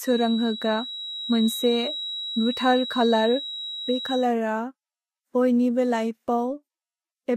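From the start until 4.3 s, a thin, steady tone near 3.9 kHz sits about 10 dB below the speech, swelling and fading slowly in level. It is a feedback whistle, likely from a loudspeaker-to-microphone loop held just at the edge of feedback.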